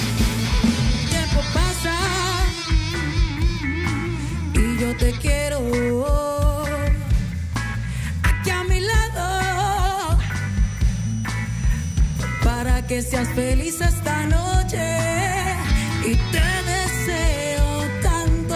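Nothing in the audio stands out as a technical problem; there's nothing here to flag.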